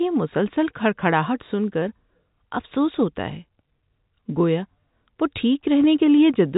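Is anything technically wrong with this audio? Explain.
No, nothing is technically wrong: the speech carries the normal G.711 mu-law telephone band, with nothing above about 3.8 kHz, and any coding damage is faint at most.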